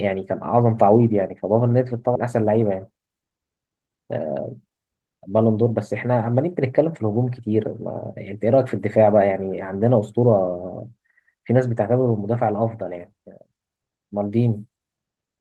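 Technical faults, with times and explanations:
2.15 to 2.28 s, skip ahead: about 300 ms of speech is lost as the receiver jumps forward, joining both sides almost directly.
2.71 to 3.31 s, jitter buffer speed-up: short pitch-period pieces are cut repeatedly, about 70 ms total, so speech runs 109% fast at unchanged pitch.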